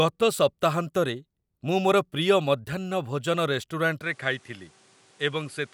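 At 4.02 s the speech abruptly turns duller and drops by about 5 dB, with nothing above 11.4 kHz and a new, faint background noise, with no gap at the change. This is likely the input switched to a poorer device. A plain filter would not shift level and noise together.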